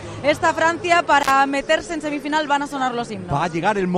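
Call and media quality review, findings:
Intermittent contact, 1.20–1.31 s: crackle-edged dropout, line open 46 ms, probable loose cable or plug. Waveform: near-flat gap; spectrogram: broadband vertical clicks at edges.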